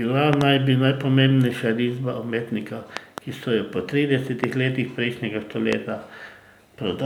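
Speech with loud pops: doubled at 0.33–0.43 s and 2.97–3.20 s, single at 4.44–4.46 s and 5.73–5.75 s, about 20 dB above the speech (about 15 dB at 4.44 s). Each is a sharp waveform spike and a thin, full-height spectrogram line, likely voltage pulses from static or switching.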